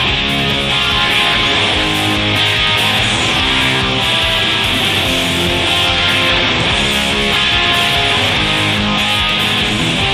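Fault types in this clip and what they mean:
No faults can be heard.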